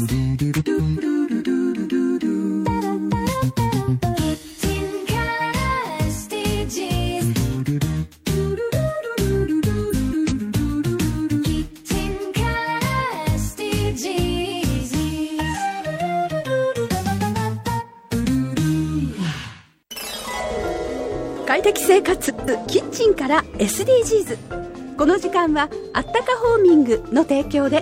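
Frames out of order occur at 0.60–0.99 s, 9.90–10.33 s and 22.26–22.67 s: two adjacent blocks of about 186 ms play swapped, which fits runs of four decoded frames. The result is a garbled flutter. Unlike a dropout or skip, nothing goes missing and the timing stays intact.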